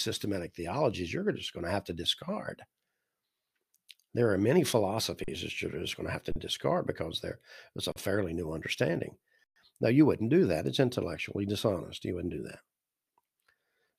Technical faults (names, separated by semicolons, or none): underrun with held sample